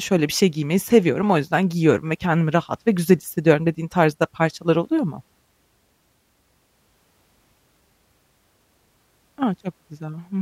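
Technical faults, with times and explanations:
No technical faults can be heard in this speech recording.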